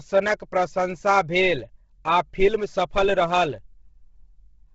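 Right through the speech there's a grainy, breathy edge and nothing above 7.8 kHz, which points to heavy Bluetooth LC3 compression, likely at around 16 kbps with 10 ms frames.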